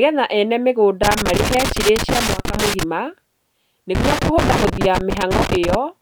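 A worn or dirty contact in the signal path makes and breaks as it shifts, producing loose connector crackle from 1.03 to 2.83 s and again from 3.95 to 5.75 s. The speech is chopped into an irregular burst of scratching.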